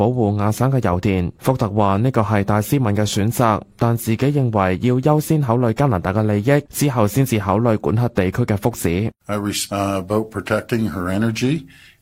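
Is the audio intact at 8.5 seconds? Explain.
Yes, at 8.5 seconds the audio plays through intact, with no dropout, click, distortion or other fault.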